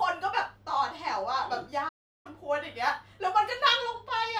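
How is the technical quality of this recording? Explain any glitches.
The recording has one clear glitch, a playback stall. At 1.88 s the speech cuts off in mid-flow and the output goes fully silent for about 0.36 s, until 2.27 s, when the sound picks up again. The likely cause is the player running short of data or its thread being briefly blocked, so nothing reached the output until it recovered. Unlike a natural pause, the silence arrives abruptly mid-sound rather than at a phrase boundary.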